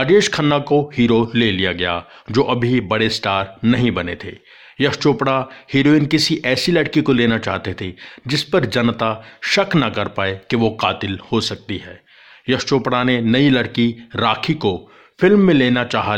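Speech, with nothing technically wrong to be heard anywhere in it. No faults turn up at any point, so there are no times or causes to report.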